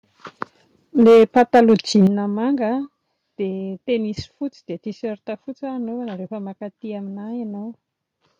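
It's a speech clip, and from 1.0 s to about 2.07 s you can hear microphone overload: the loudest syllables pick up a harsh, crackly edge because the peaks are getting flattened against the converter's ceiling. It's pushing roughly 6 dB past full scale, with something like a tenth of the samples in that stretch cut off. That's most likely the mic's input volume simply set too high for how loud the talker is. Shortly after it starts, at 1.07 s, there's a microphone volume stepped down event, with the whole level dropping by about 2 dB in one go. Then at 2.07 s, exactly as the distortion stops, it steps down again, this time by about 6 dB, and the background sinks along with the voice. Those sudden drops are likely the call software noticing the clipping and pulling the device's input gain down in discrete steps. The first step isn't enough to stop the overload, and the second, bigger one finally brings the peaks back under the limit.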